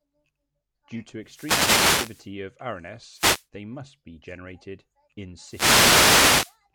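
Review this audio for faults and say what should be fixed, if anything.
The wireless microphone's FM link faded three times as reflected signals cancelled at the receiver, letting its noise rise into a swish of static over the speech. These wireless microphone noise hits fall at 1.23–2.31 s, at 3.11–3.46 s just before "they must be generated", and at 5.44–6.58 s after "must be generated in". To prevent this, use a diversity receiver with antennas kept in clear line of sight of the transmitter.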